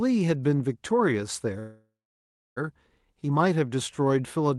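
Delayed packets likely emptied the jitter buffer, producing a call audio freeze from 1.59 to 2.58 s. The last sound fades out, leaves 0.68 s of silence, and speech resumes with nothing lost.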